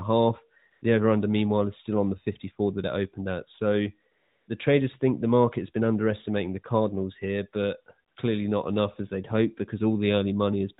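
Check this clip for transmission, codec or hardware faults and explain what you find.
The clip has one recurring transmission fault: AMR comfort noise, heard three times over narrowband speech whose light codec colouring fits AMR-NB's 12.2 kbps mode.

AMR comfort noise appears at 0.72–0.82 s, 4.12–4.48 s and 8.08–8.16 s. The encoder judged those moments silent and stopped sending speech frames, so the decoder synthesised noise from a rough level-and-spectrum description. The real background is briefly replaced by a smooth, steady hiss that switches in and out. Unlike packet-loss dropouts, these gaps are filled rather than dead or clicking.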